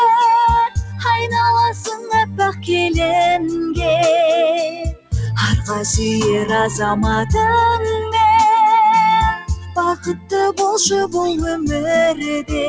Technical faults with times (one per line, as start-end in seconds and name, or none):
0.00-12.69 noise suppressor applied to music or sounds
0.68-1.05 sound cut by the noise suppressor
1.94-2.69 sound cut by the noise suppressor
4.70-5.13 sound cut by the noise suppressor
9.36-10.33 sound cut by the noise suppressor